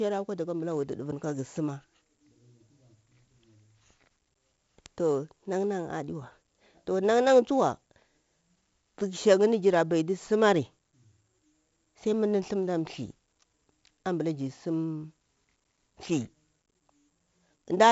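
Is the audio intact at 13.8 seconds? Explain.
No: 4-bit ADPCM compression runs the whole clip, coding each sample as a coarse adaptive step, so at 13.8 s the speech carries level-following gritty hiss and nothing above 7.7 kHz.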